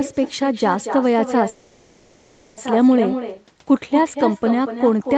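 A speech recording that carries echo with no canceller from start to finish: each phrase is trailed, about a fifth of a second later, by a thinner copy roughly 8 dB quieter. That steady, fixed lag separates it from room reverberation, which smears continuously instead of repeating. From 1.49 to 2.59 s a call audio freeze stretches the last sound into a fading buzz or hiss for 1.08 s, after which speech carries on exactly where it stopped, with nothing skipped, only delayed. It is unlike a dropout, which cuts content out. Packets held up in transit, starving the jitter buffer, are the likely cause.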